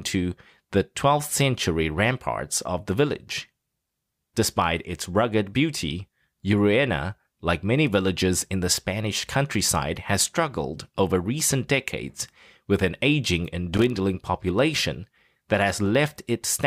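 A connector contact rapidly makes and breaks from 13.73 to 13.90 s, after "with an aging and", producing an irregular, scratchy burst of loose connector crackle.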